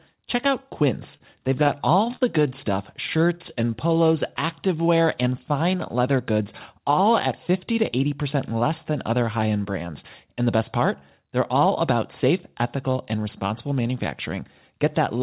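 At 1.17 to 1.21 s a short stall from a late packet holds the current sound for about 28 ms with a faint buzz or dip. Playback then resumes without losing anything. From 1.64 to 2.22 s, just before "good stuff", repeated stalls produce a stutter: four separate holds add up to 85 ms, the longest 51 ms, dragging the phrase. Between "good stuff" and "activewear and fine", from 3.16 to 3.95 s, a jitter buffer slow-down repeats pitch periods to add 60 ms, so the speech runs at 93% speed with unchanged pitch. From 5.94 to 6.39 s, after "activewear and fine" and before "all at", a jitter buffer speed-up trims around 50 ms of pitch periods, giving a hurried 110% pace at the same pitch. Throughout, the band stops at 4 kHz, which fits a 64 kbps G.711 A-law call path.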